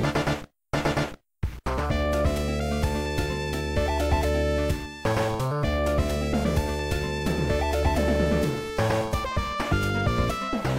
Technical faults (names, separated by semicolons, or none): none